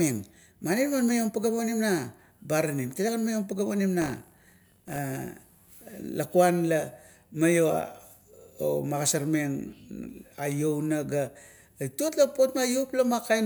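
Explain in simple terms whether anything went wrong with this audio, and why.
Right after "maiom pageap onim", from 4.0 to about 5.0 s, the speech takes on a robotic buzz, like a rattle at 50 times a second. This is buffer tearing: a small slice of each playback chunk holds audio from roughly 40 ms earlier, with sharp joins.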